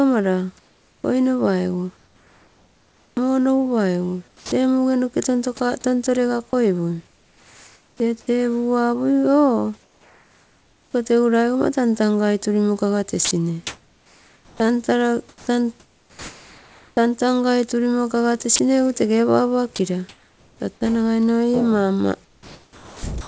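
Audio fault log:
0.59–4.52 s, 7.07–8.0 s, 9.83–10.94 s, 20.09–20.6 s: comfort noise in place of the background. The sender likely stopped transmitting during pauses in the speech and let the receiver generate its own noise, covering about 1.9 s of the first stretch and all of the shorter ones. The real room tone, already some 35 dB under the loudest speech, turns into a flat, textureless hiss about 2 to 3 dB quieter, then snaps back when talking resumes.
13.25–16.97 s, 22.25–23.27 s: sound chopped by the voice detector. The sender's voice detector likely toggled on and off repeatedly, so about 2.3 s of the first span and 0.84 s of the second went out as synthetic fill instead of real signal. Soft syllables and word edges disappear into steady noise, giving a choppy, gated effect within the 8 kHz band of the call.
18.56–18.59 s: sound dropped by the voice detector. A quiet bit of speech was likely judged to be background, so the sender stopped sending it. 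For about 30 ms the speech is replaced by generated noise, leaving a brief hole where the sound thins to hiss before returning.
20.79–20.81 s: onset clipped by the voice detector. The detector was likely slow to register that speech had restarted after the pause, so the first 20 ms were never transmitted and comfort noise filled that moment. The speech enters abruptly, without its natural soft attack.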